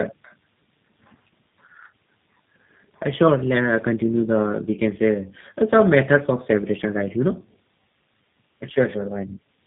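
From start to finish the speech sounds rough, muffled and warbly, with nothing above about 3.8 kHz. This is tandem speech coding: the signal appears to have passed through two speech codecs in a row, with each border decoding the audio and coding it again. The result fits a GSM full-rate leg followed by a G.729A leg, with a G.711 link between them. The second coder works on artefacts the first already left, so the distortions stack.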